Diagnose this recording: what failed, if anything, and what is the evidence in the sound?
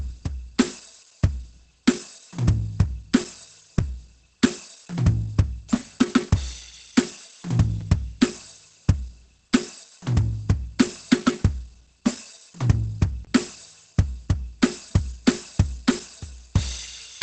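The music sounds muffled and hoarse throughout, with plainly audible coding damage and nothing above 8.6 kHz. The codec stage is at fault, likely Opus compression at a rate fitting about 16 kbps, where the encoder switches to its narrowed-bandwidth speech mode.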